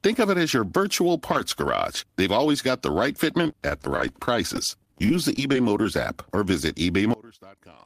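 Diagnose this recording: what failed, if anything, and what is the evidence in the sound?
From 3.44 to 5.86 s, a network fault makes the speech choppy and robotic. This is repeated packet loss: 23 short gaps, none longer than 19 ms, each filled by stretching the preceding sound, concealing about 10% of that span. A spectrogram shows harmonics interrupted by brief smeared, repeated frames.

At 7.14 s the speech suddenly drops by about 24 dB and stays faint until 7.86 s. The likely cause is one channel inverted in the wiring or playback path, so the centred voice cancels in the mono sum. The waveform abruptly shrinks to a sliver.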